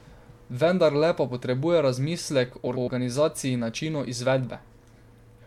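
Speech, with a frames-out-of-order fault from 2.66 to 2.88 s: two neighbouring blocks of about 104.5 ms, which fits runs of four codec frames each, play swapped. The stretch comes out as a garbled flutter, and no time is lost.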